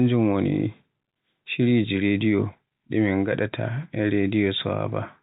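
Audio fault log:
No faults heard anywhere in this speech recording.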